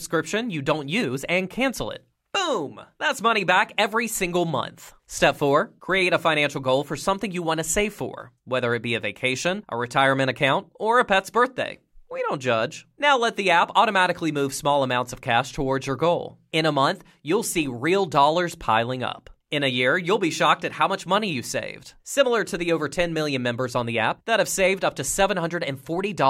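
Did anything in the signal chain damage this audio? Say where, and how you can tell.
No, nothing damaged it.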